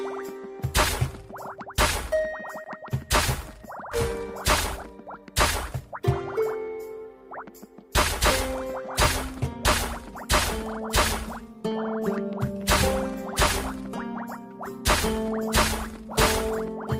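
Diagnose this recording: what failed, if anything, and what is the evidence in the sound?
Network and jitter buffer trouble here. There's a skip ahead at 3.91 to 3.93 s: playback lurches forward with no gap filled in, and close to half a second of audio just isn't there. A chunk was dropped while later material was already queued, and the two sides are butted together.

Right after that, from 4.25 to 6.39 s, there's a jitter buffer speed-up. Everything runs about 9% fast at unchanged pitch, so it feels hurried. The buffer had overfilled and was trimming short pitch-period slices to shed about a fifth of a second of latency.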